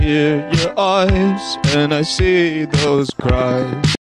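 A train of clicks runs from 2.87 s to 3.96 s, near the end of the audio: about ten sharp, near-identical pulses at a regular rate of roughly 9.3 per second, peaking around 10 dB above the surrounding sound. Their uniform shape and steady spacing point to an external periodic source, likely electrical interference from nearby equipment or an interface briefly failing. They are heard as a ticking laid over the sound.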